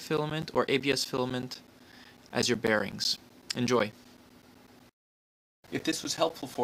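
From 0.17 to 6.55 s, periodic USB or driver dropouts blank roughly 10 ms every 0.125 s, leaving regular ticks wherever signal is present.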